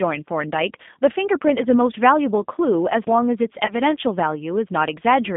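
Throughout, the speech passes through the G.729 codec at 8 kbit/s, rebuilding it from a filter and sparse pulses, so it sounds plainly rough, synthetic and confined to roughly 150 Hz to 3.6 kHz. From 3.66 to 3.74 s, VoIP packet loss concealed by the speech codec replaces about 20 ms of lost audio, which fits two 10 ms frames, with extrapolated sound. The gap becomes a fading smear, and the sound stays weak or distorted as the decoder recovers.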